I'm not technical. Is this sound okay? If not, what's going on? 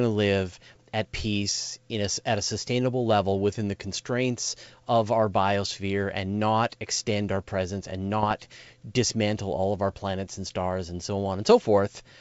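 No. This is bit errors on an ADPCM link. On a compressed phone-style connection, a tiny fraction of the digital bits got flipped in transit. Each wrong bit also throws off how the receiving end tracks loudness, so the damage lingers briefly. You hear short pops and rough crackly bursts with quick jumps in level at 5.65 s, from 8.20 to 8.33 s, and from 10.25 to 10.27 s. Between these bursts, the wideband G.722 call coding keeps the speech clear.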